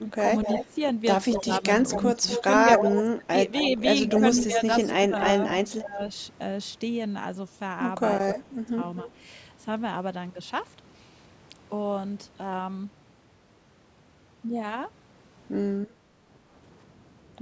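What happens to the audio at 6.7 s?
At 6.7 s the speech is intact, with no dropout, distortion or other fault, and only the usual thinning of the lowest bass from call microphone processing.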